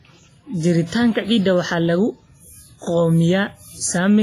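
Across the whole speech clip there is heavy codec damage, most likely from WMA compression at a low bitrate. The encoder works in long transform blocks. Its quantisation noise smears over tens of milliseconds around each sound. Weaker spectral lines are discarded outright. The result is a ringing, washy texture. A hiss rises and falls with the speech. Nothing is heard above about 15.5 kHz, and the bitrate is near 24 kbps.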